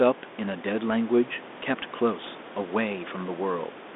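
Speech is heard here with no technical fault. Room noise sits about 16 dB below the speech, and the sound carries a narrow telephone band of roughly 250 Hz to 3.6 kHz with light G.726 ADPCM coding at 32 kbit/s.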